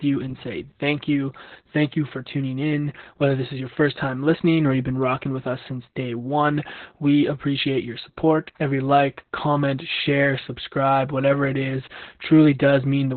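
From start to finish the speech carries Opus voice compression, and it's pretty heavy going. There's essentially nothing above 4.3 kHz, so it sounds boxed-in and muffled, like an old phone line. On top of that the voice has a hoarse, faintly robotic grain, because the excitation is being coded very coarsely. All of that points to the SILK coder running narrowband at a very low bitrate, something like 8 kbps.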